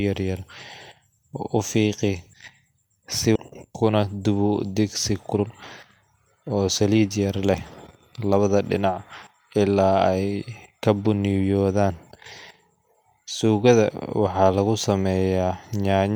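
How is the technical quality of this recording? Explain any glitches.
The recording has two clear timing problems. Playback jumps forward once, and then the buffer hurries the audio along in four short stretches.

A skip ahead occurs at 3.35–3.37 s. Around a second of speech never plays, probably dropped when the jitter buffer overflowed. The two sides are spliced with no gap. On a waveform the envelope changes abruptly, and a spectrogram shows mismatched formants meeting at one vertical seam.

Jitter buffer speed-up follows at 3.91–4.13 s (114%), 5.11–5.51 s (137%), 6.50–7.46 s (111%) and 8.18–8.40 s (113%). The receiver repeatedly removed pitch periods to shed excess delay, so speech sounds rushed at unchanged pitch. It is most obvious at 5.1 s. A spectrogram shows syllables compressed in time while the harmonic spacing stays the same.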